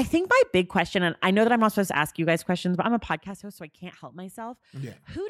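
Right after "questions but I'm a", from 3.07 to 3.44 s, there's zipper noise: the level drops by roughly 15 dB in unsmoothed 3 dB steps, about fifteen a second, and each jump ticks audibly until "host so I can't".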